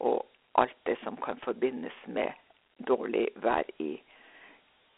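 Throughout, the speech passes through Dialogic VOX ADPCM, a 4-bit adaptive coder whose output fits a 32 kbps stream at 8,000 samples a second. The sound is confined to about 300 Hz to 3.5 kHz, with nothing above 3.8 kHz, and a plainly audible gritty hiss trails the speech.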